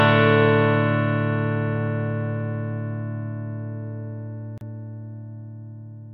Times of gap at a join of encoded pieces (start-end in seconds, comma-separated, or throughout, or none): 4.58-4.61